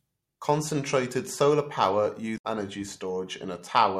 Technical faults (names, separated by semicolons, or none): damaged data in a compressed stream